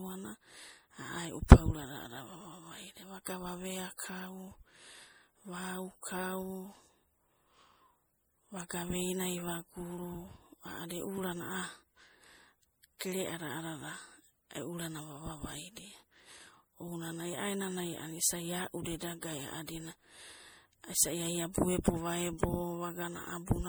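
The clip is speech with generation loss throughout its length. It sounds swirly, smeared and hollow, more than a single low-bitrate encode would explain. Consonant attacks blur, and the spectrum has a grainy, holed texture. The likely cause is repeated lossy encoding, about three passes, with a character that fits MP3 at around 64 kbit/s. Each pass requantises the audio on a shifted frame grid, so the noise and gaps compound. Nothing is present above 21 kHz.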